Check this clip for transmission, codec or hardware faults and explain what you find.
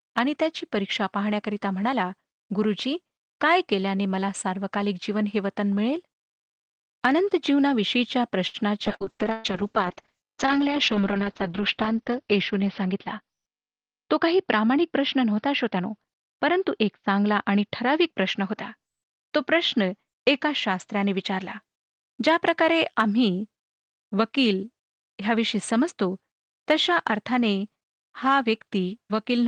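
Five network-related faults occur in this speech clip, which was carried over an Opus call path at 32 kbps with a 12 kHz bandwidth. All of them cluster between about 8.5 s and 21.7 s.

From 8.47 to 8.57 s there is a short stall from a late packet. A packet arrived after its playout time, so the jitter buffer ran dry. The receiver held the current sound for about 66 ms and then resumed where it left off. Nothing is lost, but a sound drags slightly and the delay grows by 66 ms.

From 8.88 to 21.68 s a call bitrate drop pulls the encoder from 32 kbps down to 7 kbps, where it sits for about 3 s. With so few bits, Opus quantises coarsely and narrows the bandwidth from 12 kHz to 6 kHz. The speech turns muffled and watery until the rate climbs back.

From 8.96 to 9.13 s there is short concealed packet loss. About 60 ms of audio never reached the decoder, and the receiver patched the hole with roughly 44 ms of extrapolated sound before crossfading back. 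The result is a brief smear, with a little audio gone and a small shift in timing.

From 9.32 to 9.47 s a burst of packet loss removes about 120 ms. Concealment extends the preceding sound for about 118 ms while fading it, so it becomes a held buzz or hiss. The speech then resumes further on, with the content of that gap missing.

From 12.84 to 13.71 s a jitter buffer speed-up trims the backlog. The receiver repeatedly cut out pitch-period-length slices, removing about 70 ms in total. The speech plays at about 107% speed with its pitch unchanged, so it sounds briefly hurried.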